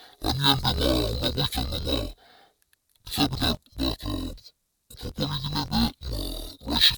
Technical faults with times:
0.00-6.97 interleaved audio read as planar

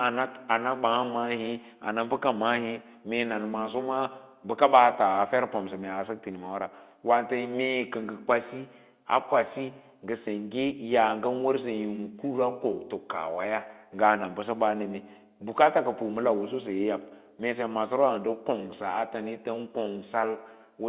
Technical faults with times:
none

